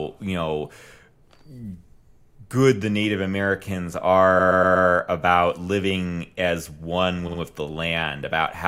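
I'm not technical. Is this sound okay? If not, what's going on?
No. The clip has repeated frames: small chunks of the stored speech were saved or sent more than once. From 4.39 to 4.87 s, just before "about living as one", a 120 ms piece plays four extra times, causing a stutter. Around 7.27 to 7.39 s, right after that phrase, a 60 ms piece repeats twice more.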